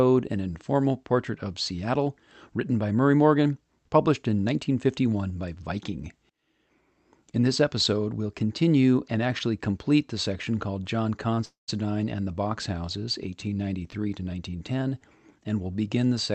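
At 11.34 to 11.39 s there is a short stall from a late packet. A packet missed its playout time, the jitter buffer ran dry, and the receiver stretched the last sound for about 26 ms before resuming exactly where it left off, so nothing is lost but everything after it arrives 26 ms later. It sounds like a brief hold with a faint buzzy edge. On a spectrogram the harmonics run flat and slightly smeared for that sliver, and the waveform shows a few near-identical repeated cycles.

From 11.45 to 11.70 s comes a longer call audio freeze, likely caused by packets held up in transit. The receiver again filled the gap itself, for about 226 ms in all: the last sound carries on as a fading buzz and then drops to silence for about 140 ms before the speech picks up from the point it stopped. Nothing is missing, but about a quarter-second pause has been pushed into the speech. The spectrogram shows a decaying, repetitive band giving way to an empty stretch, and the waveform shows a tapering envelope followed by a flat line. 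Across the clip, energy stops at about 8 kHz, the cutoff of the call codec.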